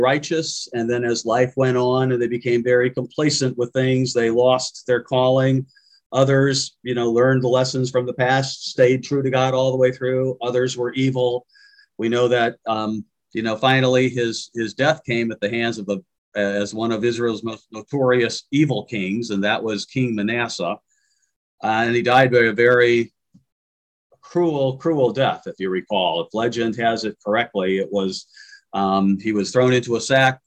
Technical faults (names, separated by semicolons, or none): hard clipping